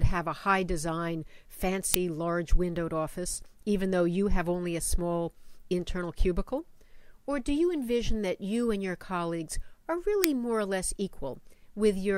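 At 1.94 s a brief, loud crack cuts through the sound. The cause is an uninitialised buffer: a block went out to playback before any audio had been written into it, so whatever stale data sat in memory was played as samples. The crack lasts about 3 ms, which fits a 128-sample block. A second, shorter crack follows at 10.24 s, about 1.5 ms long, pointing to a 64-sample block.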